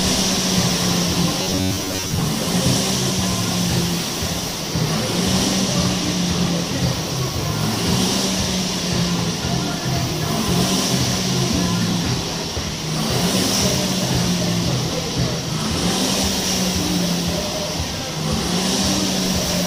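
From 1.42 to 2.22 s, new audio likely arrived too seldom, so short buffers of about 10.7 ms were replayed over most of that stretch. This robotic sound from repeated short buffers imposes a fixed 93.8 Hz buzz, turning the sound rigid and metallic.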